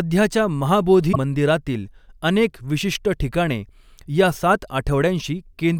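At 1.09–1.17 s, damaged data in the compressed stream throws the decoder out of sync, causing a short glitch.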